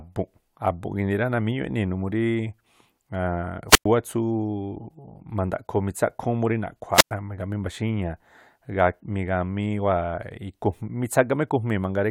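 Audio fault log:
3.68–3.86 s and 6.93–7.12 s, wireless microphone squelch dropout: the radio signal fades, hiss swells, then the receiver's squelch mutes output for 106 ms and 105 ms. On a spectrogram, broadband noise haze precedes a blank gap; the waveform flatlines before speech resumes.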